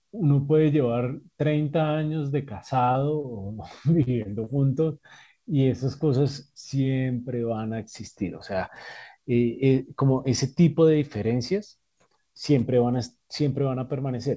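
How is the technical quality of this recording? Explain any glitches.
The recording has a cluster of packet-timing glitches between about 2.8 and 4.5 s. It came through a call path with nothing above 8 kHz, which fits a G.722 wideband codec, so it sounds a bit dull at the top.

Short stalls from a late packet hit at 2.84–2.92 s and 3.22–3.27 s. Each time a packet was late, the jitter buffer ran dry, and the receiver stretched the last bit of sound for about 32 ms and then 21 ms until the packet showed up. Nothing is lost. You just hear a syllable hang a touch too long, with a faint buzzy or dipping quality. Right after the first stall the buffer trimmed about 8 ms to catch up.

Short concealed packet losses come at 2.92–2.98, 4.03–4.10, 4.22–4.28 and 4.44–4.50 s. Each one drops about 30 ms of real audio. The decoder papers over the gap by carrying the previous sound forward, either pitched or as shaped noise, for roughly 23 to 40 ms before blending back in. 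The three around 4 to 4.5 s land close together, so that stretch has a run of little smears and wobbles, and a short consonant can get swallowed.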